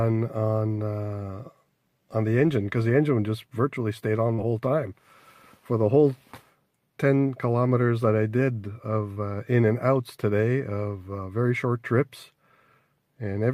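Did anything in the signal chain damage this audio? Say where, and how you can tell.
Yes, short concealed packet loss at the network stage, at 4.33–4.40 s and 9.14–9.18 s, where 40 ms and 20 ms of audio arrived too late. The decoder continued the preceding sound and blended back, leaving brief smears instead of a dropout's silent gap.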